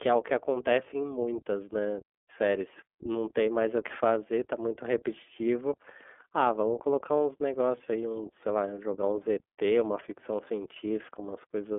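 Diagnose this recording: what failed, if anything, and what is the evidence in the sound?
Throughout the speech, the sound is narrow and slightly rough and synthetic, with no energy above 3.6 kHz and a line band of roughly 250 Hz to 3.4 kHz. This points to the iLBC codec, coding each frame independently, which fits 30 ms frames at 13.33 kbps.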